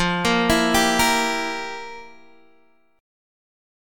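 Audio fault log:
No faults detected anywhere in the clip.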